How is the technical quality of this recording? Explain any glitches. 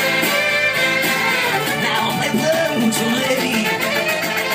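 The recording has one clear glitch: a time-stretched section running from 1.49 s to the end of the clip. At that point the pace jumps abruptly to about 1.88 times the original speed while the pitch stays where it was, so the sound feels rushed. The likely cause is software compressing that stretch to fit a length, holding pitch by dropping short pieces of the signal. On a waveform, events crowd closer together after 1.49 s. On a spectrogram, the harmonics keep their frequencies while features shorten and pack tighter in time.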